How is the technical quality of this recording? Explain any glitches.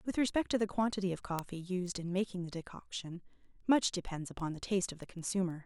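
The recording has a clock problem. From 0.12 to 5.5 s there are word clock ticks, about every 0.15 s, roughly forty of them. An unlocked receiver slips one sample each time its clock drifts past the sender's, around 150 ppm apart.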